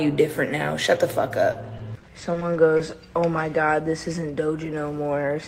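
From 1.51 to 2.81 s there is repeated packet loss, giving a robotic sound. Eight short holes, the longest 40 ms, are each patched by extending the preceding sound. This yields a choppy stutter across about 15% of the stretch, unlike a single dropout, which leaves one clean gap.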